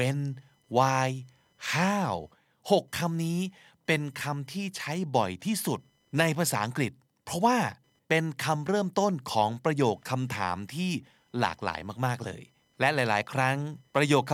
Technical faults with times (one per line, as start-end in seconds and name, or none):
0.00-14.34 computer activity noise